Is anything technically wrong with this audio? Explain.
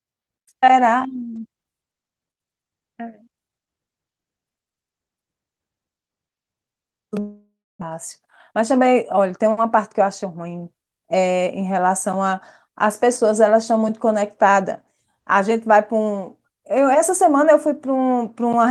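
Yes. From 7.19 to 7.83 s the speech cuts out; a long network dropout is the likely cause. The last sound decays into about 0.27 s of silence, and roughly 0.4 s never returns.

From 7.91 to 10.47 s, a jitter buffer speed-up trims pitch-period slices, running speech at 107% with unchanged pitch, recovering about 0.2 s of delay.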